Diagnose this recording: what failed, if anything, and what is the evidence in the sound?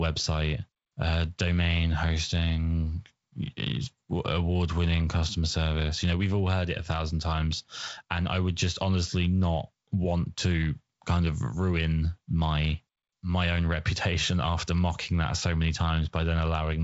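Nothing stood out on listening to this speech recording; it carries the band-limited character of G.722 wideband telephone coding, with nothing above about 7.7 kHz.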